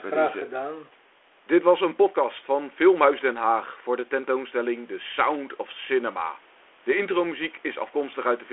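No technical faults can be heard in this speech recording. The audio is confined to the telephone band of roughly 300 Hz to 3.4 kHz, as expected from G.726 coding at 32 kbit/s with its light added grain, and the room's background noise sits about 35 dB below the speech.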